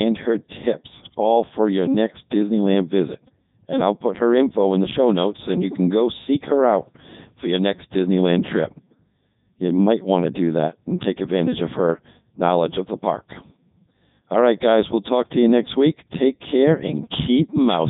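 From start to finish the speech runs through a Codec 2 vocoder, and the damage is heavy. It doesn't keep the waveform at all. It transmits pitch, voicing, energy and a rough spectral envelope, then rebuilds the voice from sine waves at the far end, which is why everything comes out robotic and buzzy. There's also nothing above about 3.8 kHz, and the overall character fits Codec 2's top 3.2 kbit/s mode.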